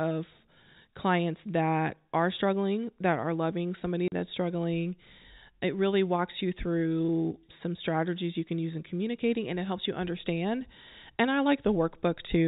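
At 4.08 s the speech cuts out for 40 ms, to 4.12 s. This is packet loss filled with silence: the gap fits two lost 20 ms packets replaced by silence, so the hole has hard edges, within G.711 telephone coding's band limit at 4 kHz.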